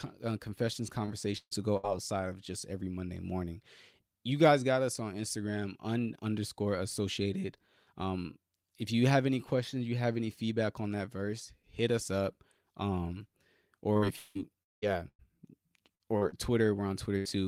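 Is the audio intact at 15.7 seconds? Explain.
No. At 15.7 seconds the audio sits inside a stretch of repeated packet loss (robotic sound) running from 13.93 to 17.32 s. Packets kept arriving lost or late, and each hole was patched by stretching the preceding sound forward before the next dropout struck. Eleven such gaps, the longest 192 ms, leave about 22% of the span concealed, so the speech turns choppy, with pieces audibly missing.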